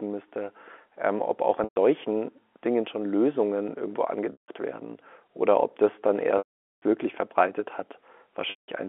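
Packets were lost at 1.64–1.76 s, 4.32–4.48 s, 6.38–6.82 s and 8.50–8.68 s (the longest 440 ms), and the receiver repeated the last pitch period, fading it over about 50 ms, so a buzzy held tone sinks into silence before speech cross-fades back in the 250 Hz–3.5 kHz G.711 telephone band.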